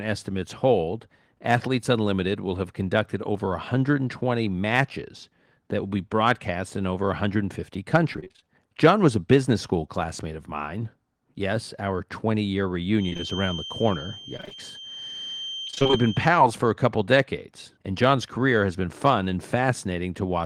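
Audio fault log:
12.91–16.36 s, feedback whistle: a thin, steady tone at 3.1 kHz sits well below the speech, swelling and fading slowly in level and ending just before "for a couple decades". It is likely a loudspeaker-to-microphone loop held at the edge of feedback, sustaining one frequency without building up.
14.37–14.53 s and 15.67–15.95 s, repeated packet loss (robotic sound): the speech turns choppy in two bursts, with about half of each span patched by repeating the preceding sound. The sound points to a rapid series of short packet gaps, none longer than about 23 ms.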